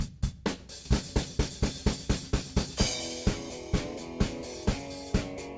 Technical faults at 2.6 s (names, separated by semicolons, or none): none